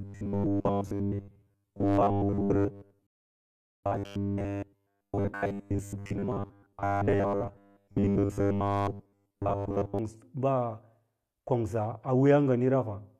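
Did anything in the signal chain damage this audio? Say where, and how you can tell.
Yes, two spots. From the start at 0.01 s through about 9.99 s the speech carries robotic sound from repeated short buffers: a rigid, metallic buzz at 100 Hz that loosely tracks the speech. That pitch points to a stretch of about 10 ms being looped, most likely at the driver or buffer stage, where new audio arrived too seldom and the software kept replaying the last chunk. Around 70 percent of that stretch is repeats, with the real audio skipped.

There's also a rebuffering stall at playback, from 3.07 to 3.83 s. The sound drops to silence and then picks up exactly where it left off, so nothing is missing. The player just ran dry of downloaded audio and waited for more. It adds about 0.77 s to the clip, and because it lands inside the buzzy stretch, you hear the metallic tone cut out and then resume.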